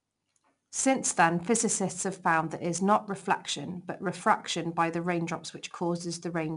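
From start to end, the speech carries plainly audible 4-bit ADPCM compression. Each sample is coded as a coarse step from a predicted value, so a gritty hiss rides on every loud syllable and rises and falls with the level. Nothing sounds above 10.6 kHz, which fits a sample rate near 22 kHz and a stream of roughly 89 kbps. On a spectrogram, a broadband noise floor brightens under each loud passage, and everything above 10.6 kHz is empty.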